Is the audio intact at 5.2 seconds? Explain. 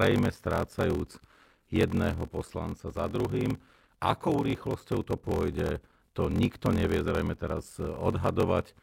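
No. At 5.2 seconds the speech carries a block size mismatch (padded), present throughout the clip. Each block read, which fits 1024 samples, is only partly filled and ends in silence, giving a 43.1 Hz buzz and speech slowed to 0.861 times normal speed at about normal pitch.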